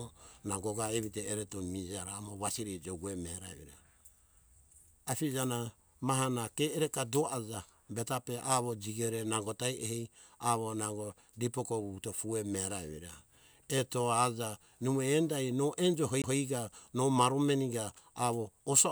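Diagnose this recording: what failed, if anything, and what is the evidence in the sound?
A CD skip at the playback stage is audible at 16.22 s in this speech: a brief mute of a couple of hundredths of a second, after which the audio resumes at a different point, just before "no maro maneka". The laser was knocked or hit a flaw and landed on another turn of the disc's spiral. Unlike a network dropout or buffer underrun, the sound does not simply pause and continue; it jumps.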